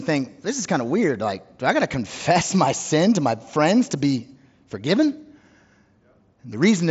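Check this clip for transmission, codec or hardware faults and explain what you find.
No transmission, codec or hardware faults turn up in this clip.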